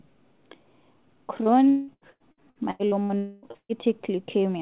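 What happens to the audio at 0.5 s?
Nothing goes wrong at 0.5 s: the audio is intact there, with no dropout, glitch or distortion, and only the band limit of the call path, with nothing above 4 kHz.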